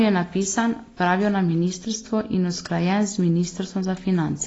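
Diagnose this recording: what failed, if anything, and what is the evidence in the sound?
Codec stage: the speech sounds dull and warbly throughout, with nothing above 7.8 kHz. This is likely AAC compression lowering its cut-off at a low bitrate near 24 kbps.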